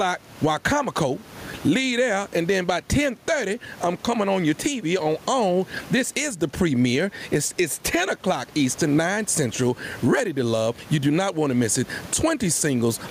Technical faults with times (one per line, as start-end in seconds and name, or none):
0.00-13.10 gain pumping